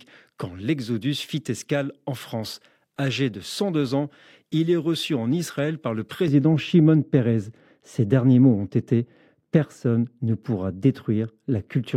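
Speech runs cleanly until 6.28 s, just after "par le", where de-emphasis applied wrongly takes over to the end: a treble cut meant to reverse pre-emphasis that was either never there or already undone, about 11 dB down at 10 kHz against 1 kHz. The sound turns dull and muffled, and a spectrogram shows the upper bands fading smoothly from that point.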